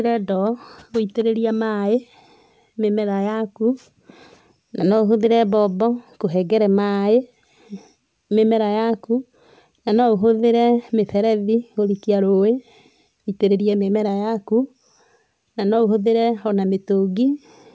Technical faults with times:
none

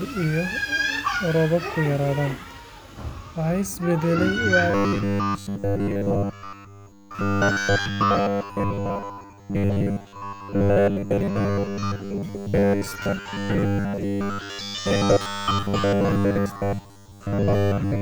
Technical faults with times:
4.71-18.02 robotic sound from repeated short buffers

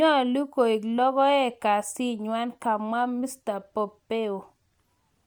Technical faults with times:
0.00-5.26 Bluetooth LC3 compression

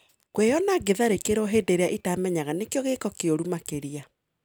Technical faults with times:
none

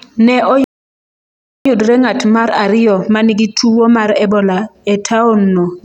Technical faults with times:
0.64-1.65 playback stall
1.65-4.65 time-compressed catch-up

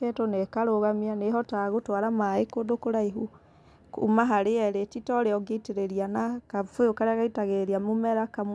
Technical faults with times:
none

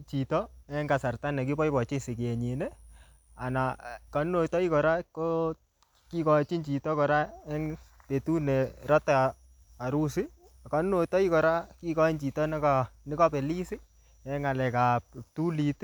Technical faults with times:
none

